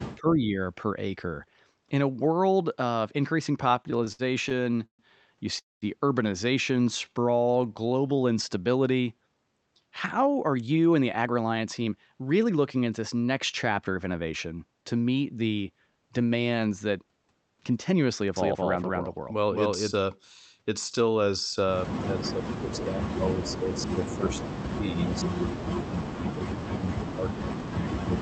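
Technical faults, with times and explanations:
0.16–0.59 s, speech suppressed in double talk: the level dips by about 10 dB over roughly a third of a second, likely because the echo canceller mistook simultaneous talk for echo and turned it down. The waveform envelope sags.
3.61–5.02 s, repeated stalls (stutter): 14 short holds, the longest 134 ms, fill 355 ms, about a quarter of the span. Each time the jitter buffer ran dry and the last sound was stretched. The spectrogram shows repeated flat, smeared frames between normal segments.
5.59–5.85 s, call audio freeze: the sound hangs as a fading buzz and then goes silent for 190 ms before resuming. Packets were likely delayed, and 230 ms is inserted with nothing lost. The waveform shows a decaying tail, then a flat gap.
6.76–8.21 s, jitter buffer slow-down: playback runs at 88% speed, with 188 ms added by repeating pitch periods to rebuild the buffer. 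The pitch stays the same but sounds drag. The spectrogram shows harmonics stretched horizontally.
9.91–12.99 s, jitter buffer speed-up: playback runs at 110%, with roughly 300 ms trimmed as short pitch-period cuts to shed excess delay. Delivery sounds hurried at unchanged pitch. The spectrogram shows compressed syllables and small seams where cycles were dropped.
18.36–19.92 s, doubled audio track: a second full-band copy at about equal level trails by roughly 200 ms, likely from a second capture path. The spectrogram shows every onset repeated at a fixed offset with no reverb tail, and both edges start and stop abruptly.
22.19–24.85 s, speech suppressed in double talk: about 3 s are pushed down by up to about 35 dB, likely the canceller suppressing its own talker during overlap. The waveform shows deep dips.
24.11–24.48 s, echo leak: a delayed copy trails by 328 ms at about 15 dB below the speech, likely residual loudspeaker echo passing the canceller. 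The spectrogram shows a faint duplicate of the formant pattern shifted to the right.
25.12–28.22 s, speech suppressed in double talk: the suppression resumes to the end, dropping the level by up to about 40 dB, likely from continued overlap being treated as echo. The waveform envelope sags deeply.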